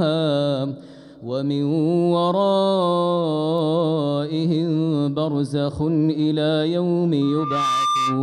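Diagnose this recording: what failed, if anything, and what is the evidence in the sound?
Loudspeaker feedback squeal starts at 7.21 s and runs to the end at 8.22 s. This is an acoustic loop between the playback side and the microphone input. A single tone at 1.2 kHz appears and swells over roughly 0.4 s. It reaches about the same level as the wanted signal. The microphone is picking up its own loudspeaker. At 1.2 kHz the loop gain exceeds one, so that frequency keeps feeding itself and grows.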